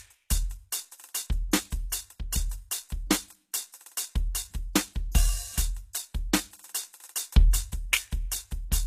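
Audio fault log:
throughout, HE-AAC compression: the music's treble is bright yet plainly gritty and metallic, its upper harmonics out of step with those below. Likely spectral band replication, which rebuilds the top by copying lower bands upward, fitting a bitrate near 20 kbps.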